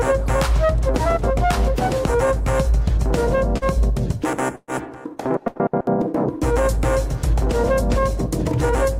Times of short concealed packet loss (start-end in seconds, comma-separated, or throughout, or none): 3.57-3.64